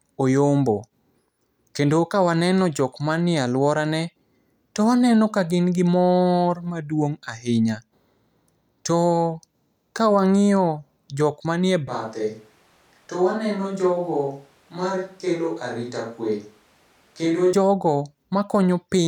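At 11.88 s the speech abruptly turns roomy and hollow, losing low end and dropping by around 5 dB, with background noise now sitting roughly 35 dB below the speech. The sound points to a switch to a distant microphone, likely because the close microphone's feed failed or was omitted and a far pickup such as a camera's took over. At 17.53 s the close, fuller sound returns just as suddenly.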